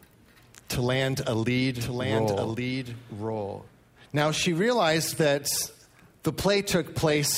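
From 1.80 to 3.68 s, a second copy of the audio runs about a second behind the original, somewhat quieter, dry and full-band, starting and stopping abruptly. This doubled audio track likely comes from the same signal being captured twice through paths with different delays.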